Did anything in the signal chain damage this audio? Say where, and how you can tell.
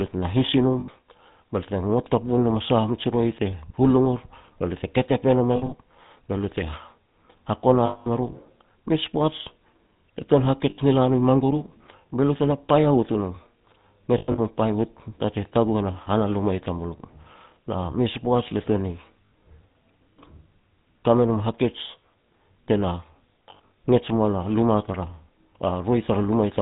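Yes. The codec stage did the damage. The whole clip has been through the GSM full-rate codec, and the bandwidth and texture fit the 13 kbps version. The codec rebuilds speech from a vocal-tract filter driven by a sparse, regularly spaced pulse train that keeps only one excitation sample in three, and nothing above 4 kHz survives. The result is plainly audible: dull, band-limited speech with a steady buzzy, gravelly roughness.

On top of that, the transmission path lost GSM frames. At each loss the decoder repeated the last good frame's settings, so the speech freezes into a rough, metallic ring. This happens at 0.80 s for 80 ms, at 5.56 s for 100 ms scattered across 160 ms, at 7.86 s for 200 ms, at 10.70 s for 80 ms, at 14.18 s for 160 ms over 200 ms, at 19.27 s for 60 ms, and at 23.50 s for 140 ms over 200 ms.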